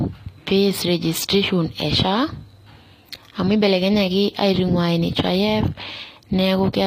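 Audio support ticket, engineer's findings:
Sibilants gritty and metallic throughout the speech, plainly audible; nothing above 15.5 kHz. Likely HE-AAC compression: treble rebuilt by band replication from lower bands, harmonics misaligned above crossover. Sound points to a low bitrate, around 24 kbps.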